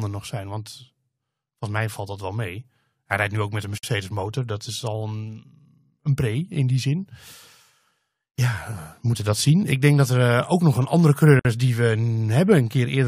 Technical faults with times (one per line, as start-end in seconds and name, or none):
3.78-3.83 gap at a join of encoded pieces
11.39-11.45 gap at a join of encoded pieces